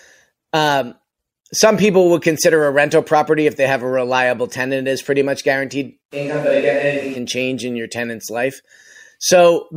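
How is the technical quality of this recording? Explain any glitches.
There's one real glitch in this speech clip, a switch to a distant microphone. Right after "is pretty much guaranteed", from 6.14 to 7.15 s, the sound suddenly goes roomy and hollow and loses bass, then snaps back just before "change in your tenant's". The level barely changes, but room noise rises to roughly 25 dB below the speech. That's likely the close mic dropping out, leaving a farther mic to cover.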